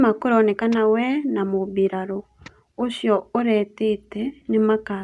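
No technical faults can be heard anywhere in the speech recording, so there are no events to place in time or explain.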